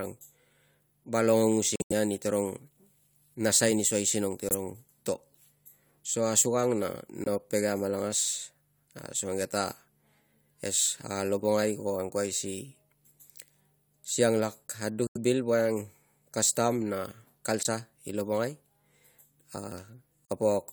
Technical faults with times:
1.76-1.92 corrupt frame muted
4.49-4.55 corrupt frame muted
7.24-7.27 corrupt frame muted
15.07-15.17 corrupt frame muted
17.61-17.66 corrupt frame muted
20.25-20.30 corrupt frame muted

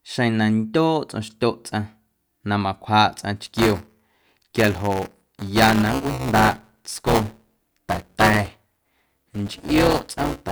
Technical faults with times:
3.46-10.52 buffer tearing

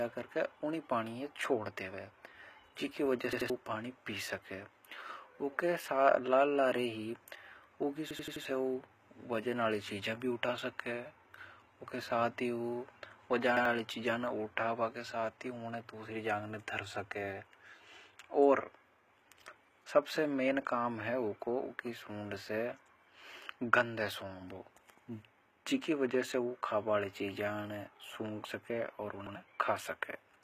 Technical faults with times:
0.00-30.43 HE-AAC compression
3.33-3.50 repeated buffer
8.11-8.45 repeated buffer
13.57-13.65 repeated buffer
29.27-29.35 repeated buffer

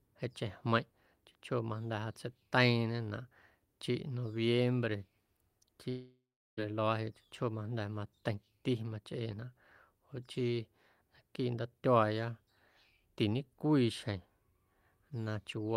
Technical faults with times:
5.89-6.59 long network dropout

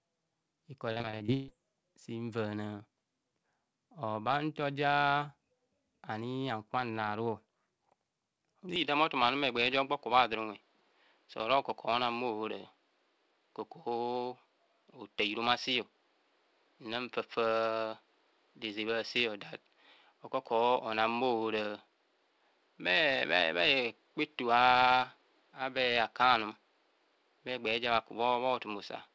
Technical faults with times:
0.92-1.50 repeated packet loss (robotic sound)
8.76-29.14 input switched to a poorer device

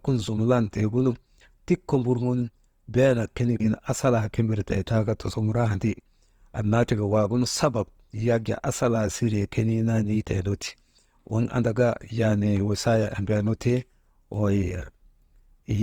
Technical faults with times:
0.00-15.82 Opus compression

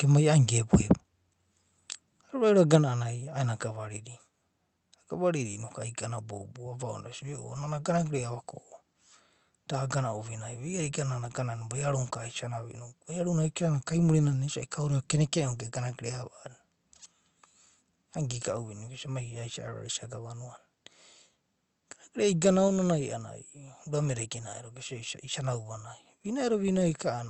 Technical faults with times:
0.74-0.92 microphone overload
0.75 microphone volume stepped down
2.76 microphone volume stepped down
22.68 microphone volume stepped down

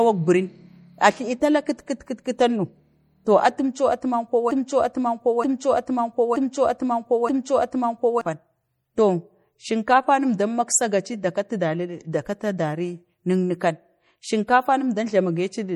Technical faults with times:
0.00-15.76 MP3 compression
4.51-8.21 broken-record loop

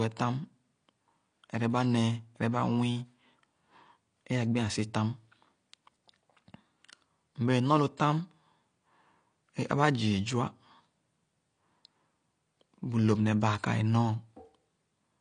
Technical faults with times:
0.00-15.20 AAC compression

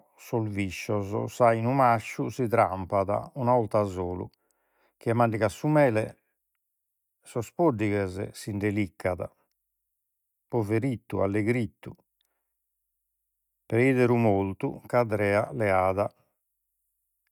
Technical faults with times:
5.44-17.31 resampler restarted on every block

